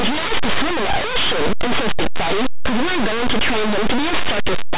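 From start to finish the speech comes through harsh, very loud distortion: linear audio read as companded. Plain 8-bit samples are being expanded as mu-law codes, so small values just to one side of zero leap to maximum level. Ordinary 8-bit grain would sit far lower and quieter.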